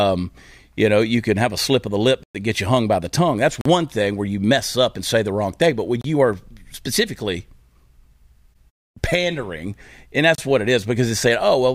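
At 2.23 s, after "slip of the lip", a 113 ms block of digital silence leaves a hole. Shorter ones, 29 to 43 ms, follow at 3.61, 6.01 and 10.35 s. The output buffer likely went unfilled. Sound cuts out and back with no fade.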